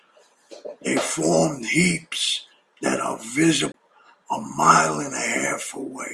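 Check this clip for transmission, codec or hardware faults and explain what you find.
One fault stands out, a CD skip in this speech recording. From 3.72 to 3.74 s the player briefly loses its place: a jolt or disc flaw knocks the laser onto another turn of the spiral, so output mutes for roughly 20 ms and resumes from a different point in the track. It sounds like a small tick followed by an abrupt discontinuity in the speech. On a waveform you would see a short flat gap with hard edges; a spectrogram shows a thin vertical broadband line and misaligned energy on either side.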